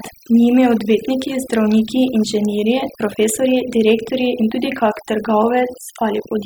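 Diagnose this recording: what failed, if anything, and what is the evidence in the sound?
The failure is overdone noise removal, in the call-processing stage. It runs through the whole speech clip. The background drops, dotted with twinkling specks. The suppressor is pulling individual frequency bands down whenever they sit close to its noise estimate, and quieter parts of the voice are being cut with them.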